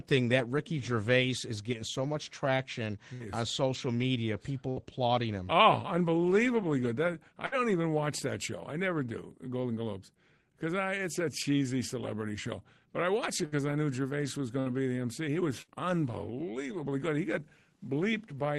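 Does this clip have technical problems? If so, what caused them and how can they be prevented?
Yes, a burst of packet loss hits this speech six times: 3.13 s (after "getting so much traction"), 4.70 s, 7.46 s (before "even watch that show"), 13.46 s, 14.60 s and 15.62 s. Each time about 60 ms never arrived, so the receiver stretches the last sound into a fading buzz or hiss for roughly 60 ms, then jumps ahead. A steadier network path or a larger jitter buffer with forward error correction would prevent it.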